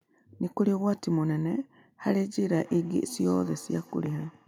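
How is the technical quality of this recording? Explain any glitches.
Feedback echo between two devices runs from 2.64 s to the end of the clip. A second device in the same room is playing back this call, and this microphone picks up that playback and sends it round again. The local echo canceller only removes what its own device plays, so it lets this loop through. The speech returns about every 150 ms as a thin, ringing repeat, at its loudest about 24 dB below the direct speech.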